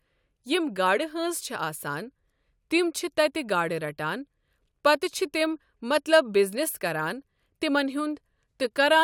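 No dropouts, clicks, distortion or other technical faults turn up anywhere in the recording.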